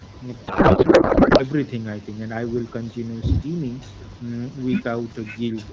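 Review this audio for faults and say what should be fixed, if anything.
From 0.47 s to 1.43 s the speech collapses into garbled noise and warble that barely follows what is being said, then snaps back cleanly. This is a codec payload misread. The AMR frames were packed in octet-aligned form but decoded as bandwidth-efficient, so every field is read from the wrong bit position and the decoder synthesises nonsense from valid-looking frames. To prevent it, make both ends agree on the AMR payload format during session negotiation.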